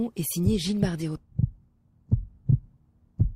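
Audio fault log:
1.15–1.17 s, skip ahead: about 0.7 s of audio was dropped in transit or discarded by an overflowing jitter buffer while later audio was already queued, so playback jumps straight forward with no gap and the sound on either side is joined almost directly.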